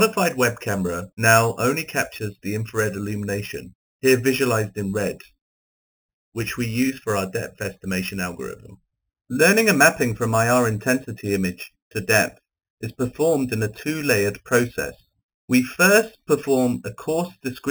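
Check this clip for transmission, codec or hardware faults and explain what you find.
One fault is present throughout the clip: imaging from sample-and-hold upsampling. The sound suggests 8 kHz material raised to 44.1 kHz by repeating samples with no smoothing filter. This leaves a bright metallic fizz from 4 to 8 kHz, about 13 dB below the signal. The fizz rises and falls with the sound's level, which separates it from steady hiss.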